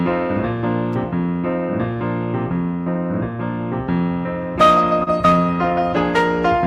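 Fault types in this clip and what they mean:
Electrical switching spike: a sharp snap at about 0.93 s sits on top of the sound, likely an arc from a nearby switch, motor or static discharge picked up by the line.
Short concealed packet loss: a brief smear from 5.03 to 5.08 s, where missing audio was patched by stretching the preceding sound for about 30 ms before blending back.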